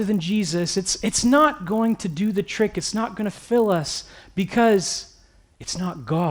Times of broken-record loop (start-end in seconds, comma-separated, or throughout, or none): none